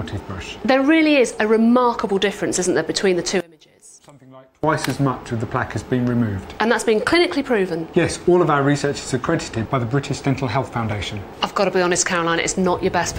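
One channel inverted, 3.40 to 4.64 s: the sound drops by about 26 dB to a faint residue, likely because reversed polarity cancels shared content when summed to mono.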